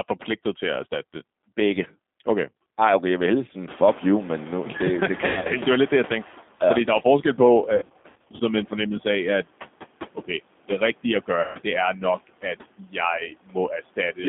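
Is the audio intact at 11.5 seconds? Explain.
No. Between 11.41 and 11.57 s, after "det rigtige at" and before "det er", there is VoIP packet loss concealed by the speech codec: about 140 ms of audio went missing, and the decoder extrapolated from its last pitch and filter state. The result is a stretched, buzzy tone or coloured noise that fades, and the voice stays weak for a short time after the audio resumes. At this moment the audio also carries G.729 codec damage: a narrow line band of 200 Hz to 3.6 kHz and rough, synthetic-sounding speech consistent with an 8 kbit/s stream. Noise suppressor artifacts are present as well, with background noise cut by about 17 dB between words and rising again beneath them.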